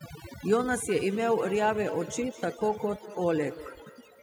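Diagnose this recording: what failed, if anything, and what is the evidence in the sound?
Call processing is where this went wrong first: overdone noise removal runs through the whole clip. The background drops to near silence with little twinkling specks where individual frequency bands flicker on and off. The suppressor is set too hard, so it pulls bands down whenever they sit near its noise estimate, and the quieter parts of the speech get caught and scooped out along with the noise.

From 0.88 s to the end there's a feedback echo between two devices. Each phrase comes back roughly a fifth of a second later, peaking about 15 dB below the speech, and the repeats sound thinner and more ringing than the original. That points to a second device in the same room on the call: it plays the far side out loud, the first microphone hears it again, and neither echo canceller touches audio its own device didn't play.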